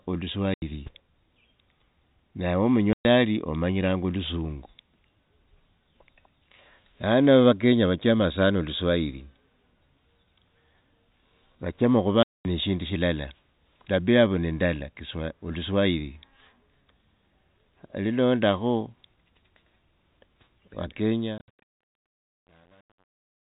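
Packet loss filled with silence cuts holes in the speech at 0.54 s (80 ms), 2.93 s (120 ms), 12.23 s (220 ms) and 21.38 s, where 120 ms drops out in short gaps across 160 ms. Each gap is silent with hard edges, which fits lost 10 ms packets.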